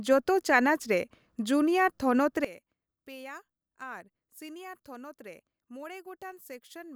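One channel inverted from 2.45 s to the end of this speech clip: the voice drops by about 19 dB, likely because reversed polarity cancels the centred sound.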